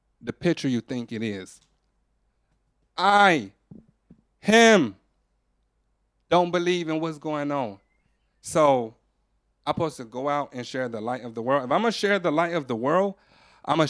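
No technical faults can be heard anywhere in this speech recording.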